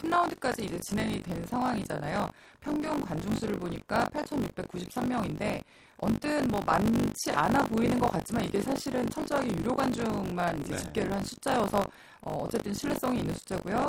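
Right from the start and running the whole way through, the speech carries buffer tearing: a gritty, robotic buzz at 50 Hz that drops out whenever the talker pauses. The writer and the hardware reader on the ring buffer have drifted into each other, so every period, which fits a 20 ms period, ends up with roughly a fifth of stale audio from around 40 ms earlier spliced in, with hard joins on either side.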